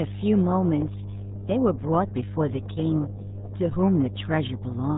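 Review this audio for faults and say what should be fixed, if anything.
Mains hum at 50 Hz runs under the speech from start to finish, sitting roughly 10 dB below it, so it is loud and constant. A ground loop or a nearby transformer is feeding the power line into the signal path. On a spectrogram it is a solid horizontal line at 50 Hz, with fainter lines at its low multiples. In the waveform the gaps between phrases never settle to silence and instead show a steady ripple. Break the ground loop with balanced cabling or an isolation transformer, and route signal leads away from power supplies.

RealAudio 14.4 codec damage is heavy and present throughout. Nothing passes above 3.8 kHz, which is why the speech sounds muffled and gargly. That is the sound of a very low-rate speech codec, and the result points to a stream of about 8 kbit/s. On a spectrogram all energy stops at a flat ceiling at 3.8 kHz, and the harmonics below it look smeared and blotchy. 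The waveform's envelope appears coarse and lumpy. Re-encode from the original source with a modern codec at an adequate bitrate, and never transcode from this file.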